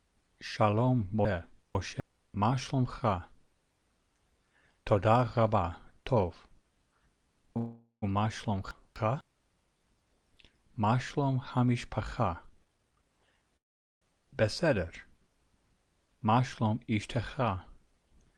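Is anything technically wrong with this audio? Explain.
Yes, three kinds of fault recur.

Chunks out of order at 1.25–2.0 s and 8.71–9.21 s: a 250 ms chunk plays two chunks late, then one chunk late, so the sound jumbles briefly.

Call audio freeze at 7.57–8.04 s and 13.57–14.03 s: a stall of about 0.45 s, likely from held-up packets draining the jitter buffer. The last sound stretches into a fading buzz. The first ends in 90 ms of silence and the second is almost entirely silent, about 430 ms. The audio then resumes where it stopped.

Jitter buffer speed-up at 12.23–13.49 s (127% speed, about 0.3 s removed) and 16.14–17.19 s (107%, a few tens of milliseconds removed): after the buffer overfills, short pitch-period slices are cut repeatedly. The sound hurries along at unchanged pitch.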